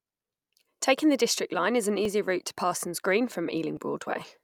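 A speech clip with two small jumps where the sound skips forward, most likely from a dropped buffer (overrun). At 2.05 s, between "is an" and "route to", the sound jumps past a loss of a few milliseconds, and at 3.77 s a longer skip of around 10 ms gives a similar jump. Unlike a buffer underrun dropout, neither event leaves a silent gap; the audio on either side is joined directly, so the fault is heard as a jump.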